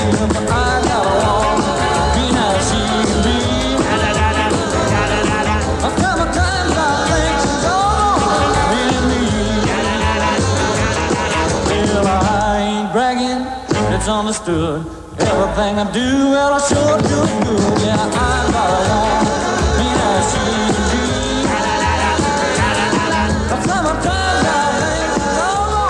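No technical faults can be heard anywhere in the audio, which stays steady and intact throughout.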